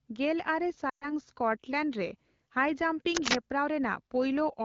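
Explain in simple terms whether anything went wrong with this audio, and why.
Two things go wrong in this speech recording.

The first is lost AMR speech frames, from about 0.89 to 1.11 seconds. This is a phone call using the AMR wideband (HD Voice) codec. Radio errors spoiled a short stretch of the signal, about 120 milliseconds, which fits six lost frames. The decoder filled the gap by repeating the last good sound and turning it down. You hear the speech drop to near silence briefly. Then it comes back, a little weak at first.

The second is cable scratch noise, from about 3.15 to 3.35 seconds. A rough, rustling burst of noise sits on top of the speech there. It is louder than the speech itself. The likely cause is a worn cable or connector being moved. Its electrical contact flickered, and each flicker added a crackle. It lasts about a fifth of a second.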